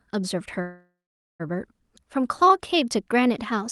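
From 0.61 to 1.42 s a call audio freeze stalls the speech, likely from delayed packets draining the jitter buffer: a fading buzz or hiss, then a flat silent waveform for about 0.47 s.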